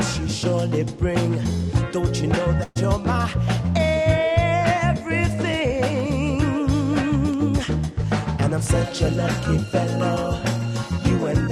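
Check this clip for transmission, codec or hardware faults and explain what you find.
There is one fault, a burst of packet loss from 2.63 to 2.77 s. For about 120 ms, a short run of packets never arrived in time. The receiver concealed the gap by extending the last sound it had and fading it down, so a voiced sound turns into a held buzz and anything else into a dying hiss. No silence is heard. Playback then picks up later, and about 120 ms of the original audio is simply missing.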